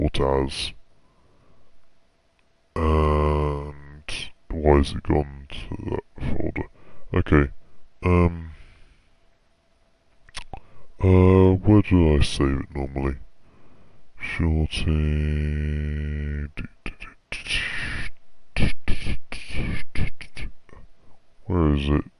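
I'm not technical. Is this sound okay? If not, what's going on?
No. The fault is a wrong sample rate, and it runs through the whole clip. The audio is being played back slower than it was captured, with nothing converting between the two speeds. Everything runs at about two thirds of its proper speed and sounds about 7 semitones lower, because speed and pitch drop together. The amount fits a recording made at 48 kHz being played as if it were 32 kHz.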